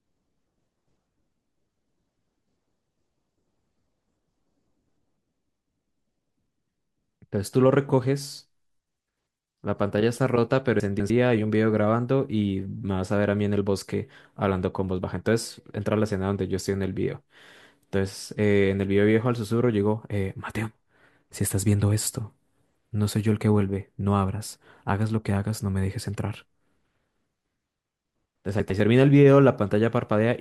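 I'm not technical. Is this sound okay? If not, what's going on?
No. The speech has chunks out of order at 10.8 to 11.1 s and again at 28.6 to 28.8 s. The audio travels in slices of about a tenth of a second, and at these points one slice arrived late, playing two slices too late the first time and one slice too late the second. You hear a brief scrambled jumble. Unlike a dropout, there's no gap or silence, because nothing is missing.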